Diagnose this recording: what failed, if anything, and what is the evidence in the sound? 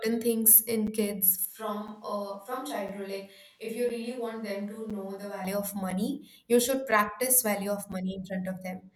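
Gap between chunks, at the playback or storage stage: short hard-edged holes of about 7 ms at 0.87, 1.88, 2.88, 3.89, 4.90, 5.90, 6.91 and 7.92 s, one per second. Each 1 s chunk starts late and silence fills the join. Unlike a packet dropout, no sound is missing, and the spacing is perfectly regular.

Switch to a distant microphone, at capture: from 1.45 to 5.45 s the sound abruptly turns roomy and hollow, thinner in the bass, roughly 5 dB quieter, with room noise around 35 dB below the speech. The likely cause is a failed close mic replaced by a far one. Added reverb would not raise the noise floor or switch so suddenly.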